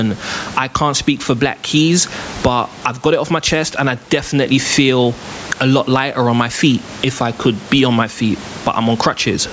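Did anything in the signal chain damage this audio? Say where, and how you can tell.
Yes, gain pumping runs through the whole clip. The gain swings by around 20 dB. The likely cause is input gain set far too high, with a fast limiter clamping each peak. Steady room noise wouldn't rise and fall with the speech.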